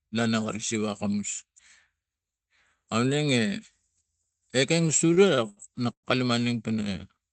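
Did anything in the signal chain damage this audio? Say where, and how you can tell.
Yes, at the network and jitter-buffer stage. Repeated stalls (stutter) run from 4.87 to 6.06 s: seven pauses where the last sound is stretched, the longest 107 ms. Late packets starved the buffer, and the fill-in drags the timing without gaps, unlike packet loss.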